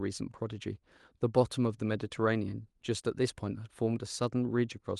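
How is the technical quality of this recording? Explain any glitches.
Nothing stood out on listening to this speech recording; there are no glitches to explain.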